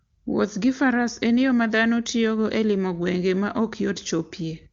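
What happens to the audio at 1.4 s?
Nothing goes wrong at 1.4 s: the speech there comes through intact, with the AMR wideband (HD Voice) coding carrying it cleanly at its top rate.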